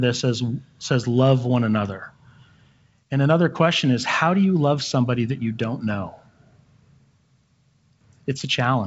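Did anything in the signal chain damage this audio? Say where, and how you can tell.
No, nothing in the signal chain damaged this audio; it went through G.722 wideband telephone coding at 56 kbit/s, which leaves nothing above about 7.7 kHz.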